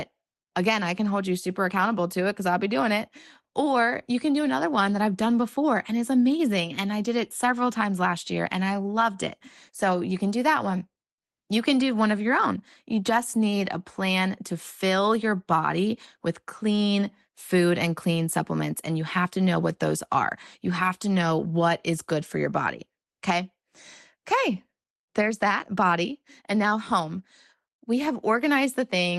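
No faults found in this speech recording; the call path behaves as expected, with the top end rolling off around 12 kHz, which fits an Opus link running near 24 kbps.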